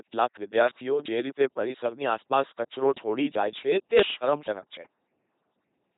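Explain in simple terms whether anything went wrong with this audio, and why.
Throughout the speech, the voice has been rebuilt by an LPC-10 vocoder, which replaces the real voice with a buzz or a hiss shaped like speech. That gives a mechanical robot sound, not merely a muffled phone line, with nothing above 3.9 kHz.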